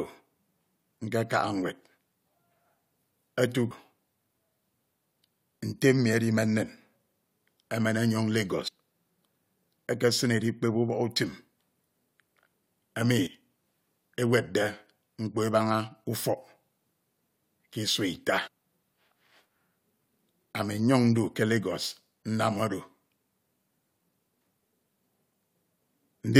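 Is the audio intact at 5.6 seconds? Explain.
Yes, the audio is intact at 5.6 seconds, with no fault at that moment.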